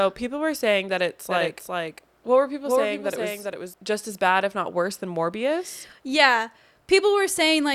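From 1.3 s to 3.74 s, after "were saying that it's", a doubled audio track appears, likely from the speech being captured a second time through a slower path. An undecayed copy about 5 dB quieter trails roughly 400 ms behind, then cuts off abruptly before "just as bad if".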